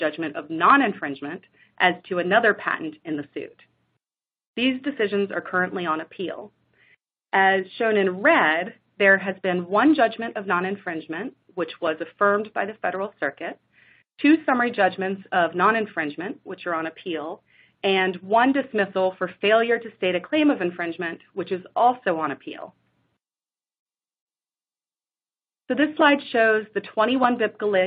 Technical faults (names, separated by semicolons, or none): none